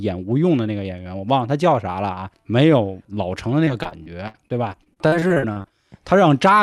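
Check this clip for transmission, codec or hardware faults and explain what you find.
One fault: repeated packet loss (robotic sound) from 3.65 to 5.72 s. Packets kept arriving lost or late, and the receiver patched 17 holes, the longest 64 ms, by extending the preceding sound. Roughly a fifth of the stretch is filler, so the speech turns choppy, with fragments missing. The Opus call path, audible as a top end stopping near 12 kHz, is not at fault.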